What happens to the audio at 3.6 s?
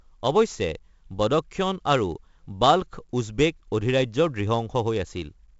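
At 3.6 s the speech carries the 4-bit ADPCM compression heard throughout: level-following gritty hiss and blurred attacks, with nothing above 7.7 kHz, pointing to roughly 16 kHz sampling.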